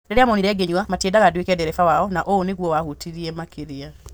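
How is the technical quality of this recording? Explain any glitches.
The opening stretch of speech, from 0.0 to 2.88 s, runs noticeably fast, about 1.53 times normal pace, while the pitch stays put, so it comes across rushed. This is a time-stretched section: most likely software squeezed the audio to fit a shorter length, dropping short slices to keep pitch steady.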